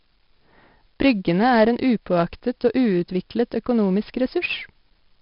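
A speech clip carrying heavy 4-bit ADPCM compression damage throughout: gritty hiss rides every loud syllable and smears sharp onsets, and nothing sounds above 5.3 kHz, pointing to about 44 kbps at a low sample rate. A spectrogram shows noise tracking loudness beneath a hard ceiling.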